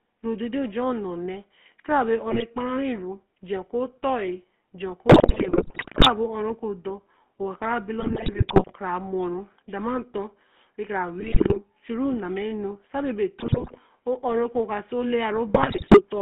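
From the start the speech has a buzzy, gravelly roughness and a narrow, boxy tone confined to roughly 200 Hz to 3.4 kHz. This is the GSM full-rate codec. At what sounds like 13 kbps, it rebuilds the voice from a vocal-tract model driven by coarse pulse excitation.

Squawks, pops and gargling break in at 2.30–2.43 s, 5.08–6.09 s (the longest and harshest), 8.00–8.73 s, 11.20–11.59 s, 13.40–13.79 s and 15.54–16.01 s. These are GSM bit errors. Corrupted filter, pitch and gain values warp the spectrum or level frame by frame, with the worst bursts pointing to error rates of several percent.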